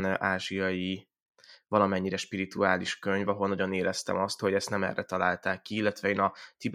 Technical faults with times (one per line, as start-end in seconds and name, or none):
none